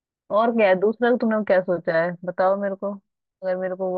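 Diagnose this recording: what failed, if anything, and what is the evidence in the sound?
Nothing failed; no audible fault at any stage.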